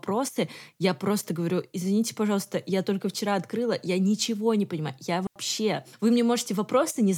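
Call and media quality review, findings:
Digital wireless dropout at 5.27 s: clean hole of near silence, about 89 ms, no noise burst either side. Wireless receiver muting after losing too much data on the link, fading out and back in very quickly.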